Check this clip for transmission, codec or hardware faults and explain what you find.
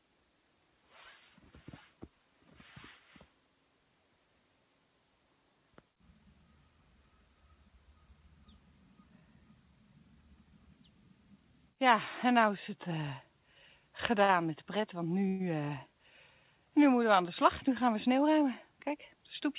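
Three jitter-buffer faults appear late in the clip, all carried over a narrowband call path whose content stops at 4 kHz, which fits a G.711 A-law link.

A short stall from a late packet occurs at 14.24 to 14.31 s. A packet missed its playout time, the buffer emptied, and the receiver extended the last sound by 45 ms until the packet arrived, then resumed at the same point. Nothing is lost, but one sound is held slightly too long with a faint buzz or dip. On a spectrogram, the harmonics run flat and unchanged for that stretch. The waveform shows a brief repeating cycle.

A call audio freeze follows at 15.28 to 15.42 s. About 116 ms of continuation audio is inserted, and it never reaches silence. The sound holds and turns to a buzz or hiss as it fades. The likely cause is packets held up in transit draining the buffer, with the receiver synthesising audio until they arrived and then picking up where it stopped. 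On a spectrogram this appears as a smeared, frozen band that dims toward its end. The waveform shows a decaying periodic stretch.

A jitter buffer speed-up runs from 17.42 to 18.45 s. The buffer held more audio than its target, so the receiver repeatedly cut short pieces of one or a few pitch periods, removing about 50 ms in total. Playback runs at 105% speed with pitch unchanged, so the passage sounds slightly hurried. On a spectrogram, events sit a little closer together with no shift in harmonic spacing. The waveform shows small splices where cycles were dropped.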